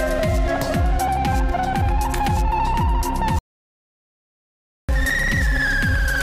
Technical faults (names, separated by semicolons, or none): audio dropout to silence